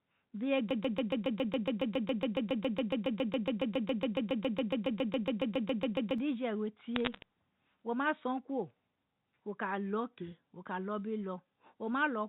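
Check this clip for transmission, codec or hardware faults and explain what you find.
Two faults stand out, a long broken-record loop followed by a brief burst of bit errors, both heard over band-limited telephone audio in G.711 mu-law coding that cuts off at 4 kHz.

From 0.71 to 6.18 s, a broken-record loop repeats one 139 ms fragment about 40 times, back to back. The likely cause is a stalled player or stream resending its last fragment. It sounds like a rapid stutter. On the waveform it appears as an identical repeating block, and the spectrogram shows evenly spaced vertical stripes.

From 6.96 to 7.23 s, bit errors on a digital phone line flip roughly a few bits per thousand, each corrupting a single sample. They are heard as sharp crackling ticks over the speech. The waveform shows isolated single-sample spikes, and the spectrogram shows thin full-band vertical lines.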